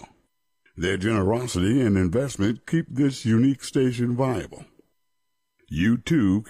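No technical faults can be heard anywhere in this recording.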